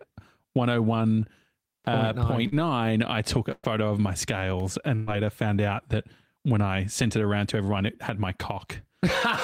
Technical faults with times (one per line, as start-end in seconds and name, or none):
2.47-2.55 short concealed packet loss
3.52-3.66 burst of packet loss
4.60 electrical switching spike
4.95-5.10 burst of packet loss